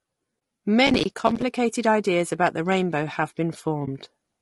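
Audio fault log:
Throughout: low-delay AAC compression. The speech sounds rough and grainy throughout, with a hiss-like fill between the pitch harmonics and a top band that sounds thin and synthetic. The damage is plainly audible. The likely cause is AAC-ELD, the low-delay codec used for calls, at a bitrate around 32 kbps. Its short frames separate harmonics poorly and spend bits fast, so at this rate the codec cannot keep the fine harmonic structure and fills the gaps with noise.
0.39–0.41 s and 3.85–3.88 s: AAC frame loss with muting. Each time, the sound briefly dips into a soft hole about 20 ms long, fading out and back in. A single frame's worth of audio was lost each time, and the decoder replaced its spectrum with silence. The overlapping transform windows on either side smooth the edges into a short fade rather than a hard cut, so each gap is heard as a brief dropout.
0.87–1.42 s: processor overload crackle. 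For just over half a second a gritty, tearing crackle rides on the speech, then stops. The pattern fits a processor missing around thirty audio buffer deadlines over that stretch, with buffers of roughly 5 ms. Each missed buffer was output as silence with hard edges, and that rapid run of tiny abrupt gaps merges into a continuous crackle until the load eases.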